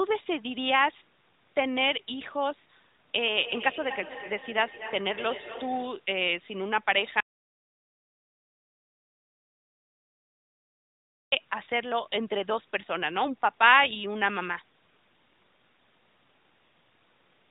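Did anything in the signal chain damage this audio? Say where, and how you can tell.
Yes. From 3.36 to 6.12 s each phrase comes back about a fifth of a second later, thinner and more ringing, peaking about 12 dB below the speech. This is feedback echo between two devices in call processing: a second device's playback re-enters a microphone whose echo canceller cannot see it.

From 7.20 to 11.32 s the speech cuts off into dead digital silence with no room tone, lasting 4.12 s, then resumes mid-flow. This audio dropout to silence is likely a lost input device or link while the recorder kept writing silence.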